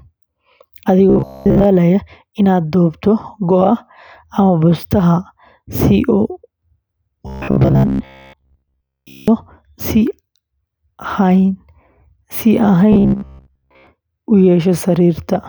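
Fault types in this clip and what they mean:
Robotic sound from repeated short buffers: the speech becomes a stiff, metallic buzz at 66.7 Hz during 1.10–1.65 s, 7.27–9.28 s and 12.93–13.87 s, still loosely following the words. That fixed drone suggests a snippet of about 15 ms being looped while most of the real audio is skipped, likely because new data arrived too slowly. Unlike a dropout there is no silence, and unlike a pitch shift the buzz ignores intonation.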